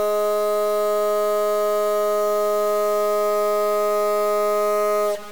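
A short music clip with a harsh, buzzy grit riding on the whole thing from start to finish, and it doesn't let up in the quieter moments either, where a gritty noise floor sits instead of clean silence. That's the signature of a stuck bit: one bit in the data, likely stuck from a faulty line or converter, knocking about half the samples off by a fixed step of about -30 dBFS, in a pattern that follows the waveform.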